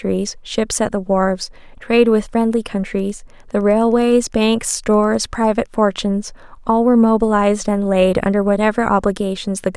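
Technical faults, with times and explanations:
2.95–5.67 s Wi-Fi interference: faint, steady ticking about ten times a second, well below the speech, as the circuit rectifies a nearby radio's 102.4 ms beacon.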